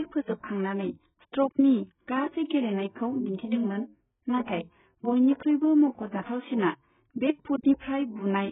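Speech runs dull and muffled from start to finish, with nothing audible above about 3.8 kHz, so sibilants lose their edge and turn thin and fizzy, while sustained sounds take on a smeared, warbling texture. This is heavy AAC compression damage, likely from AAC-LC at a very low bitrate, around 8 kbps. With so few bits per frame, the encoder drops the upper band entirely and quantises what remains so coarsely that detail smears across each frame.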